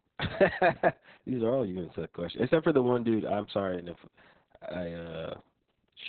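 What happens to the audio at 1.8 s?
At 1.8 s the speech carries Opus voice compression, present across the whole clip. The narrowband SILK coder, at a rate consistent with about 6 kbps, keeps only content below about 4 kHz and coarsely codes the excitation, so speech sounds heavily muffled, hoarse and robotic.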